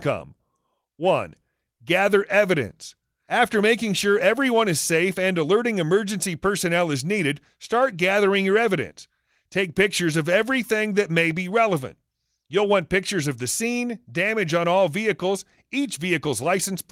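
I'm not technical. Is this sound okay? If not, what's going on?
Yes, nothing wrong can be heard in this recording.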